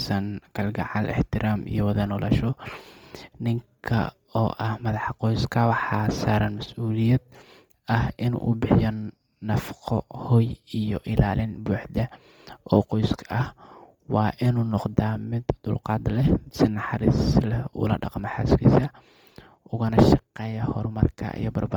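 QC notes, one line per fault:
throughout, Bluetooth LC3 compression: speech has a heavy grainy, breathy fizz up top where the upper spectrum was noise-filled, likely LC3 at a low rate, around 32 kbps.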